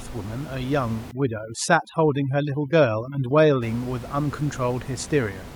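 From 1.11 to 3.62 s the background drops and breaks up into twinkling specks. This is overdone noise removal: the reduction was set so strong that bands near its noise estimate, including the room noise about 16 dB below the speech, were cut away along with quieter speech detail.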